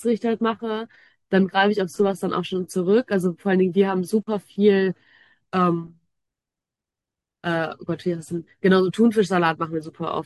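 No technical faults are audible.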